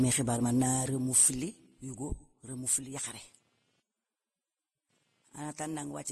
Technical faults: computer activity noise; transcoding between lossy codecs

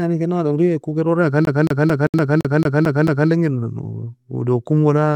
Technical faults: CD stuck on one turn; gap at a join of encoded pieces

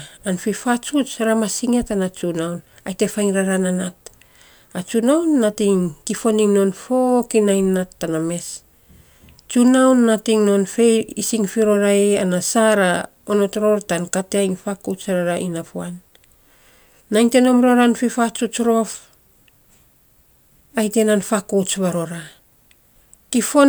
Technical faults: none

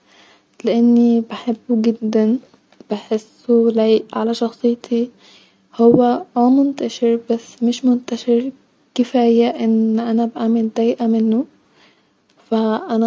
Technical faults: none

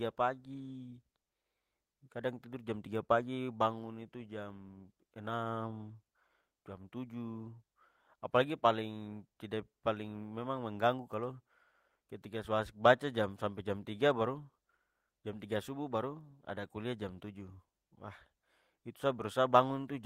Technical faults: none

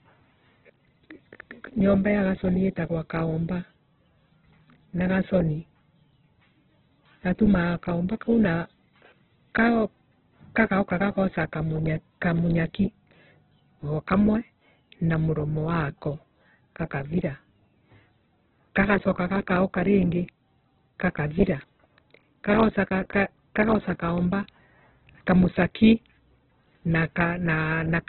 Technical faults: Opus compression

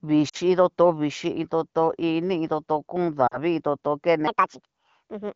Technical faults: lost AMR speech frames; section at the wrong speed

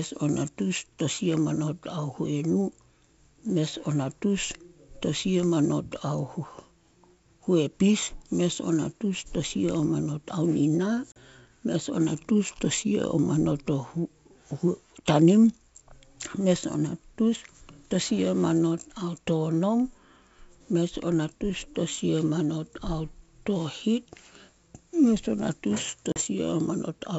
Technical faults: packet loss on an ADPCM call

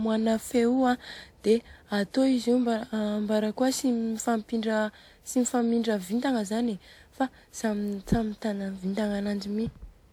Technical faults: generation loss

